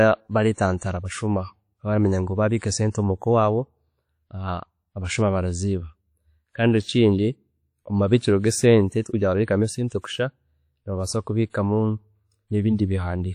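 Across the whole speech clip the sound is washy and ringing, with a hiss that swells and falls with the signal and nothing above 19.3 kHz. This plainly audible damage is likely WMA compression, its coarse quantisation fitting a low bitrate near 48 kbps.

At 0.53 to 0.58 s, 0.78 to 0.81 s and 11.50 to 11.54 s, a brief hiss creeps in just ahead of sharp onsets, which sound softened. This is pre-echo: block-wide quantisation noise spills 36 to 45 ms before each attack.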